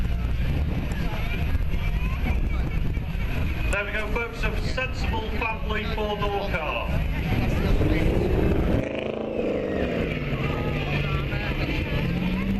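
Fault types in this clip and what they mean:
Block of digital silence: about 0.35 ms of output, only a handful of samples, was filled with zeros at 0.47 s. Because the signal drops to silence and returns with no fade on either side, the two hard edges merge into a single tick rather than an audible hole, a brief click riding on top of the sound.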